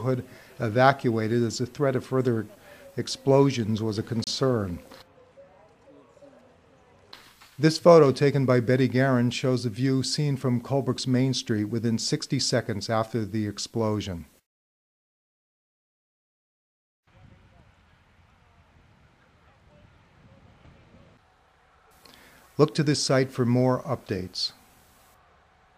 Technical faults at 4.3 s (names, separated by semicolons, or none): Bluetooth stall